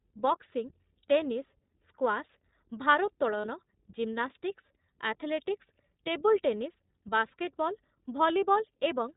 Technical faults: iLBC codec; lost iLBC frames

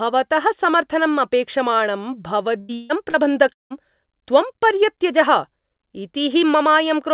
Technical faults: burst of packet loss; short concealed packet loss; long network dropout

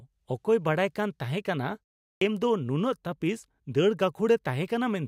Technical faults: clipped start after a pause

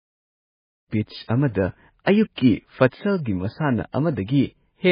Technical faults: MP3 compression

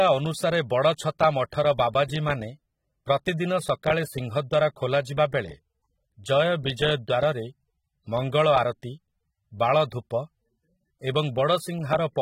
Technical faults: AAC compression

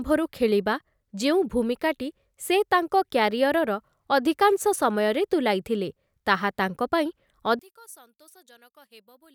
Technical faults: one channel inverted

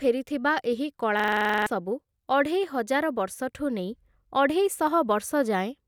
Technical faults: system hang loop

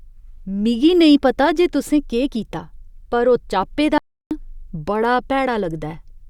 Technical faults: audio dropout to silence

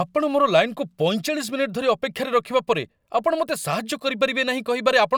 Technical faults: none

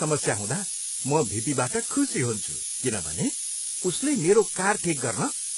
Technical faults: low bit depth with noise shaping; HE-AAC compression

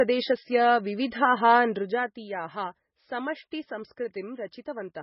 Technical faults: MP3 compression; zipper noise

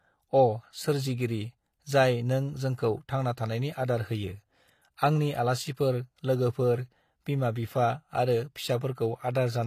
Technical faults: HE-AAC compression

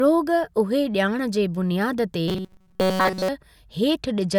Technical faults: robotic sound from repeated short buffers; Bluetooth SBC bit pool drop

